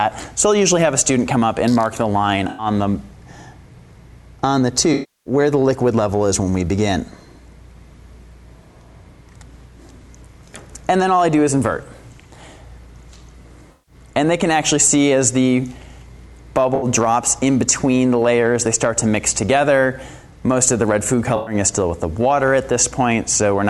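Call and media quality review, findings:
AAC frame loss with concealment at 2.48–2.66, 4.93–5.33, 13.72–13.95, 16.75–16.85 and 21.36–21.54 s. The decoder smears the last good spectrum into each gap of about 64–320 ms, giving a noisy or phasey blur rather than a hard dropout's silence and clicks.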